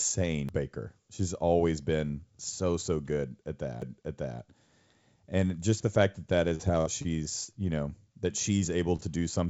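At 0.49 s the laser is thrown off its track by a knock or a flaw and lands on a different turn of the disc's spiral. This is a CD skip: the player mutes for only a few milliseconds, then resumes reading from the new position. What reaches the ear is a small tick followed by an abrupt jump in the speech, as if a slice had been spliced out or repeated. The same thing happens again at 3.82 s, with an equally short mute and the same tick-and-jump.

From 6.50 to 7.08 s the network drops packets over and over. Four separate gaps open, the longest 43 ms, and together they lose about 80 ms of audio. The receiver keeps papering over each hole by extending the last sound, so about a fifth of this stretch is synthesised fill, 123 ms in total. This repeated packet loss gives the speech a choppy, robotic texture with pieces missing.

At 7.45 to 7.51 s a single burst of about 40 ms never reaches the decoder in time. 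This short concealed packet loss is patched by carrying the previous sound forward for 35 ms, then blending back into the real signal. The result is a brief smear or wobble, and any short sound inside that window can disappear.

At 8.96 to 9.02 s a packet turns up late and the jitter buffer runs dry. In this short stall from a late packet, the receiver holds the current sound for 26 ms until the data arrives, then carries on from the same point, shifting the delay by that amount. Nothing is lost, but one sound lingers slightly too long with a faint buzz or dip. Throughout the clip the call path's band stops at 8 kHz, which fits the G.722 codec.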